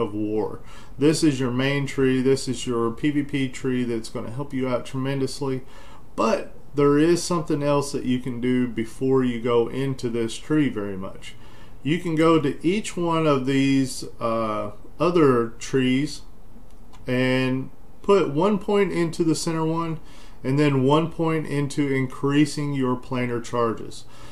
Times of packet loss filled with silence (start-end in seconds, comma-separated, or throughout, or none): none